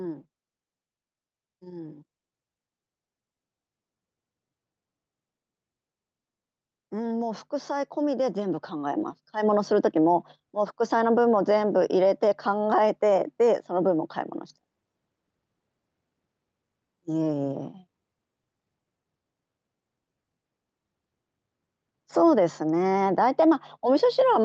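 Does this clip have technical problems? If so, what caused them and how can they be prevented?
Yes, there's an automatic gain rising fault from about 6.9 s to 10.87 s. The gain control decided the input was too quiet and pushed its gain up gradually, by about 11 dB over those four seconds, so the speech and the background noise swell together rather than the voice alone getting louder. The call codec path, which sounds like Opus with the top end rolled off around 8 kHz, carries that swell along. To prevent it, set a sensible input level up front and slow or cap the AGC's upward adaptation.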